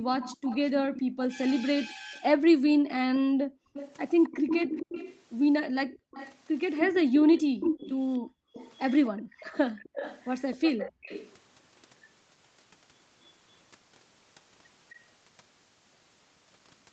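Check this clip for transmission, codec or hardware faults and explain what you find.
Two faults show up in this speech clip: the background is repeatedly gated by an echo canceller, and there is an echo leak. The audio stops at 8 kHz throughout, which points to a wideband Opus call path.

Background gated by the echo canceller, from 0.0 to 3.73 s and again from 5.99 to 11.05 s: the room tone between phrases sinks by up to about 40 dB and then returns. The dips add up to roughly a second and a half in the first stretch and about a second in the second. The canceller is clamping the microphone while the far end's loudspeaker plays. This differs from a dropout because the speech itself survives and only the ambience collapses.

Echo leak, from 0.16 to 11.37 s, plus a brief fragment at 13.23 s: a delayed copy of the speech trails it by 265 ms. For most of that span the copy sits around 10 dB below the voice, and at 13.23 s it is far fainter, around 35 dB down. 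The likely cause is a loudspeaker-side echo canceller failing to remove what its microphone picked up and sending it back. The fixed 265 ms delay and voice-like content set it apart from room reverberation, which smears continuously instead.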